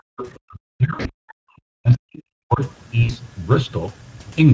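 Right from the start the background is gated by the echo canceller. Up to 0.17 s the room sound drops by about 40 dB for roughly 150 ms, clamped while the loudspeaker plays. From 0.17 to 0.39 s a faint second voice, about 20 dB under the talker, comes through. That's likely the other side's voice leaking through an incomplete echo cancellation.

From 0.45 to 1.31 s the talker dips and cuts out in pieces, down by about 40 dB over roughly 700 ms. The likely cause is speech suppressed in double talk, with the canceller turning everything down while both sides talk. Inside that stretch, 0.93 to 1.11 s carries VoIP packet loss concealed by the speech codec: about 120 ms is missing, scattered over 160 ms, with the longest gap 60 ms. The decoder fills it with buzzy, fading extrapolation. Right after, at 1.29 to 1.34 s, there's another brief leak of the other side's voice, now about 35 dB down.

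From 1.48 to 2.61 s the double-talk suppression returns, with the voice chopped by up to about 40 dB across roughly a second. At 3.03 to 3.13 s a second concealed loss of 60 ms leaves a short, smeared, tonal patch.

Underneath all of it is the Speex codec at a setting that fits about 16.8 kbps. Its damage is plainly audible as a hoarse, noisy texture on the voice. The call's microphone processing caps things at 8 kHz.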